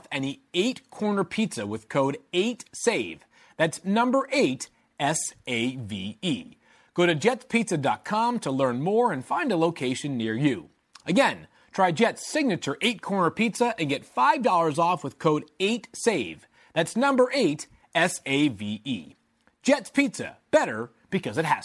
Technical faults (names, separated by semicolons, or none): none